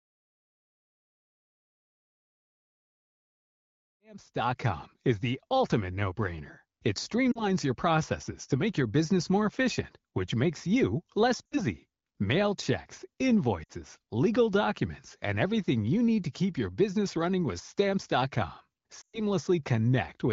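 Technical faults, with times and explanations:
7.31–7.47 s, 11.47–11.62 s, 13.63–13.72 s, 19.01–19.24 s, lost AMR speech frames: speech briefly warbles or smears before "your processes to make", after "which makes you less", and before "legal documents and everything". About 40, 60, 60 and 120 ms of frames were corrupted, so the AMR-WB decoder repeated the last good pitch and vocal-tract settings at falling gain. The longest gap audibly fades toward silence before speech returns roughened.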